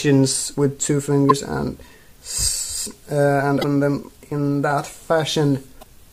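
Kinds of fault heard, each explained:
Damaged data in a compressed stream: corrupted bytes make the decoder misread frames and lose sync until it finds the next valid header, producing short glitches of about 45 ms at 1.27–1.31 s, 3.59–3.64 s and 5.79–5.84 s.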